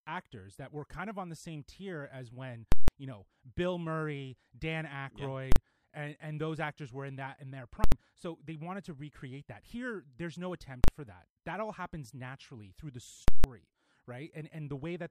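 At 2.72 to 2.88 s, 5.52 to 5.56 s, 7.84 to 7.92 s, 10.84 to 10.88 s and 13.28 to 13.44 s, the speech breaks into invalid numbers at full scale. A calculation yielded infinite or invalid values. These were pinned to the largest positive or negative value for the whole block. The two 160 ms blocks give a loud pop, dead air, then another pop. The 40 ms and 80 ms blocks collapse into single sharp bangs.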